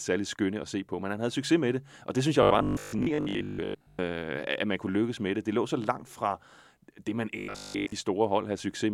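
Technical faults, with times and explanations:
2.43–4.01 s, robotic sound from repeated short buffers, just after "og det synes jeg": the speech becomes a rigid metallic buzz at 50 Hz that still roughly follows the words. This is likely caused by audio arriving too seldom, so playback keeps repeating the last 20 ms buffer in place of most of the real signal, and that 20 ms period imposes the fixed 50 Hz pitch.
7.38–7.92 s, robotic sound from repeated short buffers, after "det man": the same 50 Hz buzz returns. Here the likely cause is that essentially all of the incoming audio is replaced by repeats of a 20 ms buffer.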